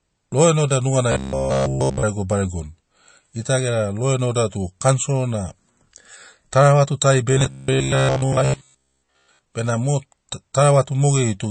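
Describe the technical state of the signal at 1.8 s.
At 1.8 s, audio arriving too seldom likely forces the software to repeat one short block over and over from 1.12 to 2.03 s, discarding the real signal. This produces robotic sound from repeated short buffers: a rigid, metallic buzz at 66.8 Hz, which fits a buffer of about 15 ms, with nothing fresh heard in that span. Throughout, likely MP3 compression at a starved bitrate cuts everything above 8.3 kHz and drops weak detail, leaving plainly audible watery, swirling damage consistent with about 36 kbps.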